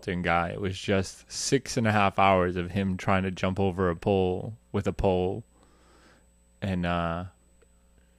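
Current drawn by the USB bus in 125-microsecond microframes is leaking into the audio path through power or ground, producing USB whine for the whole clip: a steady, fixed-pitch tone at 8 kHz, strongest at 16 kHz, sitting roughly 45 dB below the speech.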